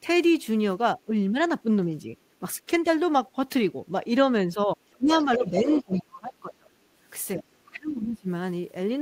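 From 0.95 to 1.38 s and again from 2.03 to 2.86 s, the talker's level dips in brief patches, by about 10 dB and then by a few dB. This is speech suppressed in double talk, likely an echo canceller turning down the near voice while the far end spoke. The waveform envelope looks notched. Deeper cuts follow from 4.46 to 6.99 s and from 7.36 to 8.28 s. They drop by as much as about 30 dB and leave near-silent gaps totalling over a second.

From 5.22 to 6.01 s, the other side's voice leaking through is audible as a second voice about 15 dB below the speech. It is likely residual loudspeaker echo the canceller missed. On a spectrogram it appears as a fainter, separate harmonic pattern.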